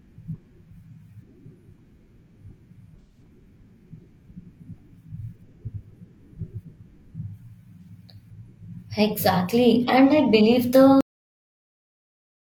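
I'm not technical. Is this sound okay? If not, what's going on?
No, there are two problems. The first is AAC frame loss with concealment. At about 3.0 to 3.2 s, and again briefly around 7.82 to 7.89 s, small chunks of the speech went missing, and the player patched the gaps with a guess, so those moments sound smeared and noisy.

The second is a cut-off end. At 11.01 s the audio stops dead, mid-sound, with no natural fade. Everything after that is pure silence, because the last bit of the recording was simply never saved or played.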